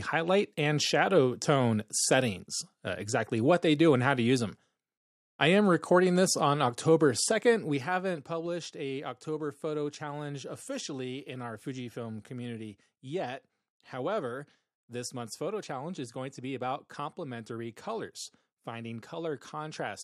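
From 7.2 to 8.52 s there's zipper noise: the speech gets pulled down roughly 10 dB in unsmoothed 2 dB jumps, about four a second, each ticking audibly.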